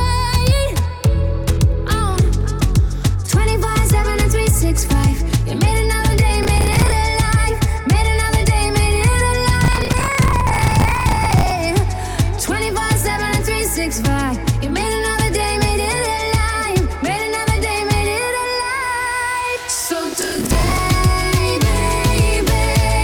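Processor overload crackle occurs at 6.43–6.92 s, 9.64–11.51 s and 20.13–20.78 s. Overloaded processing misses many short buffer deadlines, consistent with buffers of around 10 ms. Stale audio is repeated with hard edges, producing gritty tearing that stops once the load clears.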